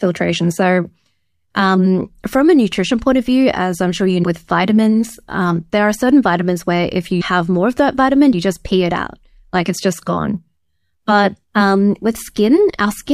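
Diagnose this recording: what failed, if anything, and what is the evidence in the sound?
Compressed frames skipped at 7.20 s, in the codec or decoding stage: right after "certain vitamins where if", the speech jumps ahead by roughly 200 ms to "more of that vitamin", which fits about seven 26.1 ms frames going missing.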